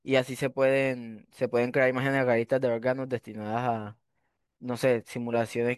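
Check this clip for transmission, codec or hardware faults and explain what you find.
Nothing to flag here: I listened through the speech and didn't catch a single fault worth pointing out.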